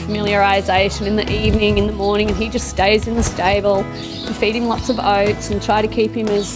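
A steady ticking at 20 per second runs from start to finish, riding on the sound and fading out wherever the audio goes quiet. That is the signature of a resampler restarted on every block: the conversion from 44.1 kHz down to 16 kHz was done in separate 50 ms chunks. At each chunk boundary the filter lacked the real neighbouring samples, leaving a small error at every seam, and those seams repeat as the tick.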